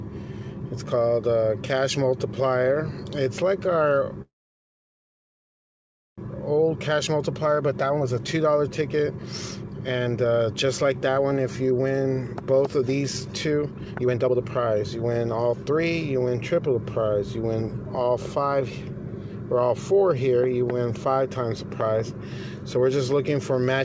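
At 4.22 s the last sound is stretched into a brief fading buzz, and almost all of the roughly 2 s gap up to 6.20 s is silence before it picks up exactly where it left off. That's a call audio freeze, most likely from delayed packets draining the jitter buffer. Nothing is lost; a pause is simply inserted.

Right after, from 6.27 to 16.68 s, there's a jitter buffer speed-up. The receiver is shedding the backlog from that stall by snipping out tiny pitch-period slices over and over, about two seconds in total. Playback runs around 19% fast at unchanged pitch, so it sounds rushed.

Then between 21.81 and 22.02 s you get a loud pop, really two sharp clicks in quick succession, roughly 10 dB above the surrounding level, with the audio carrying on underneath. The cause is probably an electrical step or glitch somewhere in the chain.

The call path tops out at 8 kHz throughout, which fits G.722 at 64 kbps.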